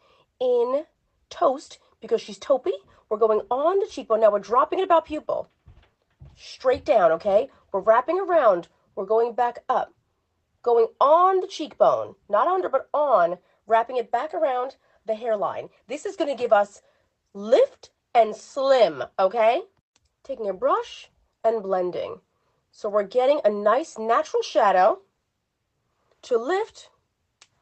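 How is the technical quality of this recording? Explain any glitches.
No glitches or dropouts here.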